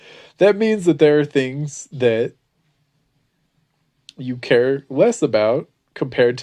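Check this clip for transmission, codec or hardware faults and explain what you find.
No faults found.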